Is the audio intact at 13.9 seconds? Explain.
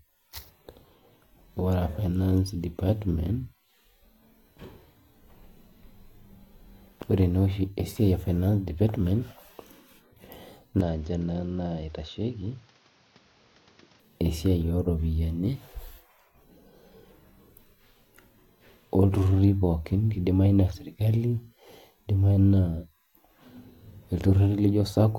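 No. From 10.81 to 14.0 s the speech loses everything above 6.9 kHz, drops a few decibels and gains its own background noise, with no gap at the switch. This is likely an input switched to a poorer device. The new noise and level change set it apart from plain band-limiting.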